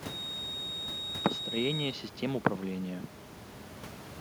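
From 0.0 to 2.0 s a feedback whistle sits behind the speech: a thin, steady tone at 3.8 kHz, only a few dB below the speech and swelling and fading slowly in level. Likely cause is a loudspeaker-to-microphone loop held just at the edge of feedback, with room noise about 13 dB below the speech.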